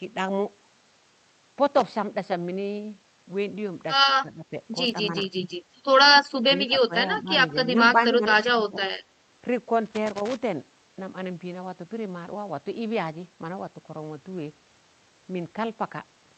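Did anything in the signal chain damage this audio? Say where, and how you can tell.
Yes. The first problem is in the analogue wiring. A loose connector crackle appears from 1.67 to 1.93 s and again from 9.86 to 10.36 s. Each burst is an irregular scratching, not a steady hiss. That pattern points to a worn or dirty contact opening and closing as it moves. The signal is chopped in and out, and any DC on the line snaps with each break.

The second problem sits in call processing, ahead of the Opus codec, which caps the top end near 8 kHz. The speech level sags four times: 4.22 to 4.52 s, 6.69 to 6.93 s, 7.23 to 7.30 s, and 8.10 to 8.86 s. The dips run from about 10 dB to about 20 dB, deepest in the last one. This is speech suppressed in double talk, likely from the echo canceller mistaking the talker for loudspeaker echo while both sides spoke.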